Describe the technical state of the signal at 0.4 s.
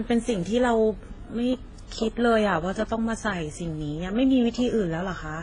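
At 0.4 s the speech carries the artefacts of different codecs heard together, and the top end is missing: nothing comes through above about 10.1 kHz. This runs through the whole clip, not just this moment. It's likely transcoding between lossy codecs, which fits a very low-rate HE-AAC encode re-encoded to WMA at a modest rate. The second encoder spends bits reproducing the first one's artefacts, adds its own, and keeps the lowest cut-off from the chain.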